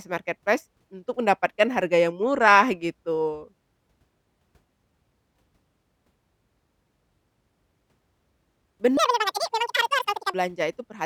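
Speech with a section at the wrong speed from 8.97 to 10.34 s: it plays twice as fast and around 10 semitones high, likely from a clock mismatch, so spectrogram harmonics jump upward and waveform detail compresses.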